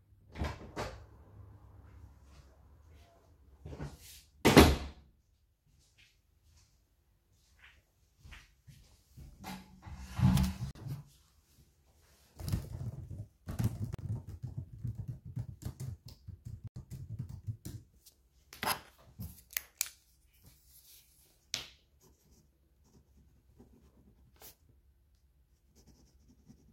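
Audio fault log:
10.71 s, 13.94 s, 16.68–16.76 s: block of digital silence. The sound cuts to silence for about 43 ms, 43 ms, then 85 ms, with abrupt edges. The lengths fit 2048- and 4096-sample buffers left unfilled. On the waveform these are flat zero-line gaps, and on the spectrogram they are blank vertical strips.
13.04–13.61 s, 19.25–21.39 s: drift correction step. Speed drops by about 6% and pitch falls 108 cents, just over a semitone, then snaps back. The likely cause is a clock-matching resampler changing its rate in one jump. On the spectrogram all harmonics step down together and then jump back up, and on the waveform features are slightly stretched.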